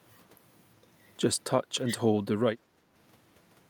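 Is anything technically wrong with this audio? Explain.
Yes. The speech dips twice, from 1.63 to 1.94 s and from 2.58 to 2.94 s, by about 5 dB. This is likely speech suppressed in double talk. The echo canceller seems to confuse the talker with far-end echo during overlap. So it turns the talker down, briefly and shallowly.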